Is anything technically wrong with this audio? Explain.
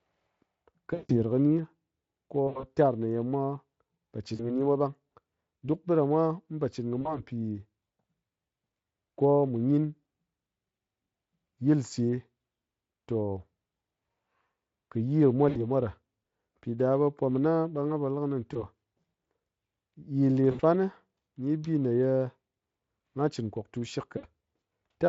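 Yes. There is VoIP packet loss concealed by the speech codec at 0.93–1.17, 2.47–2.64, 4.35–4.63, 7.01–7.20 (just after "ɓiɗamwa mu po chɨn"), 15.49–15.61, 18.53–18.64, 20.51–20.61 and 24.17–24.26 s. The longest gap covers about 160 ms. The decoder fills each gap by repeating its last pitch and filter and lowering the gain, so the speech smears into a fading buzz. On a waveform this shows as a decaying envelope. On a spectrogram it appears as frozen, blurred harmonics. The underlying Speex coding is light.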